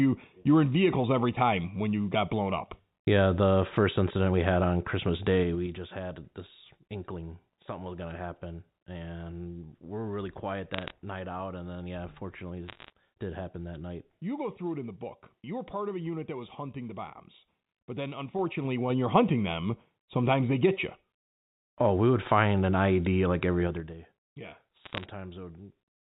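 Zipper noise at 5.38 to 5.80 s: the level drops about 10 dB in 3 dB steps, roughly ten per second, each step ticking. Unlike random crackle, the ticks are evenly spaced and occur only while the level moves.

Bit errors on a digital phone line at 10.74 to 10.91 s and 12.68 to 12.90 s: flipped bits in the G.711 mu-law stream corrupt single samples, producing sharp irregular ticks. The level stays steady, which distinguishes this from zipper noise.

Zipper noise at 18.26 to 19.20 s: a rise of about 10 dB in 3 dB steps, slower at roughly four per second.

Zipper noise at 23.64 to 23.98 s: a drop of about 15 dB in 3 dB steps at roughly fifteen per second, a faster and denser zipping.

Bit errors at 24.84 to 25.04 s: random crackle at a fraction of a percent error rate, with no accompanying level change.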